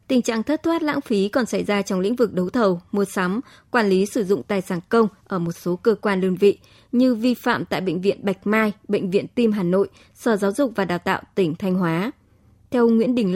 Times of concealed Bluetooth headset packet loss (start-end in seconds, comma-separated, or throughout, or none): none